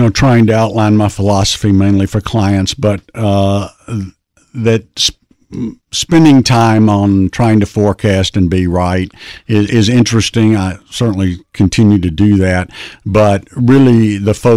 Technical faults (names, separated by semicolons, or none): hard clipping